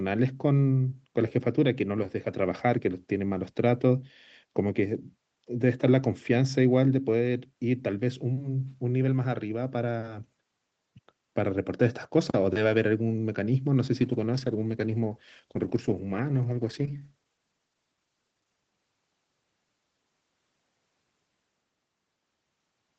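From 14.02 s to 18.68 s the speech goes through a call bitrate drop. The connection's bandwidth estimate fell and the Opus encoder was forced to code far more coarsely, with the sound pointing to a fall from around 32 kbps to roughly 11 kbps, held at that low rate for almost the whole stretch. The speech turns rough and watery, then clears once the bitrate recovers. On a spectrogram, the harmonics in that span look blotchy and smeared, with less fine detail below the 8 kHz ceiling that the call path imposes throughout.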